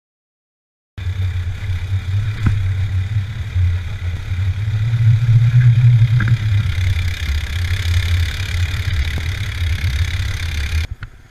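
Overlapping chunks cause brief stutters at 4.17 s and 9.18 s, 5 s apart. At each join about 13 ms of audio plays twice because each chunk starts before the previous one ended. The sound is a short doubled click, not a silent gap.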